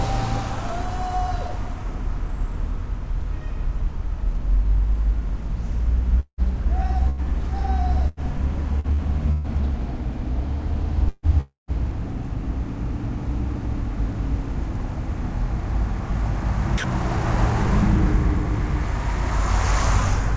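From 6.20 to 6.41 s the sound breaks off. About 180 ms is missing: the last sound is stretched into a fading buzz or hiss, then roughly 80 ms of silence, most likely a long network dropout.

Bursts of packet loss follow at 7.10–7.21 s, 8.08–8.20 s and 9.32–9.47 s, removing about 90, 90 and 120 ms. Each time the preceding sound is held and faded before the audio resumes further on.

Between 8.80 and 9.02 s, and again from 11.09 to 11.71 s, the sound turns choppy. Short stretches (about 0.1 s, then about 0.4 s in total) are swapped for synthetic background noise, likely sound chopped by the voice detector.

At 16.78–16.84 s a 60 ms piece of sound gives way to steady comfort noise, likely sound dropped by the voice detector misjudging it as background. Across the clip nothing is heard above 8 kHz, consistent with the G.722 call codec.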